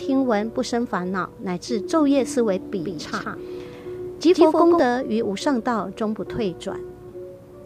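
From 2.79 s to 4.79 s the audio carries a doubled audio track: a second, full-band copy of the same sound runs roughly 150 ms behind and a few dB quieter. The likely cause is the signal being captured twice, once through a slower path. Unlike an echo or reverb, the copy has no decay tail and no room colouring, repeats only once, and switches on and off abruptly at those two times.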